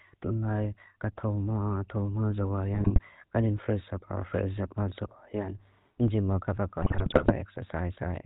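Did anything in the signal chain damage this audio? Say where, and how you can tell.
Yes. At the codec stage, GSM full-rate coding, consistent with 13 kbps, modelled the speech with sparse pulse excitation and cut everything above 4 kHz, leaving a buzzy, gravelly roughness throughout.

In the network stage, GSM bit errors corrupted the decoder's filter, pitch and gain values at 2.75–2.99 s and 6.82–7.33 s, so the speech squawks, pops and gargles, worse in the second burst.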